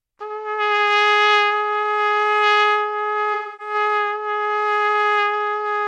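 From 3.34 to 3.74 s there is AAC frame loss with concealment. About 256 ms of coded audio is missing, consistent with six lost frames. The decoder rebuilds the gap from the last good spectrum. The sounds turn smeared, noisy or phasey there.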